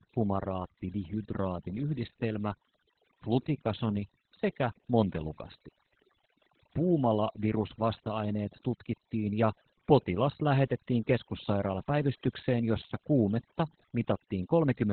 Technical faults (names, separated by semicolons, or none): overdone noise removal; Opus voice compression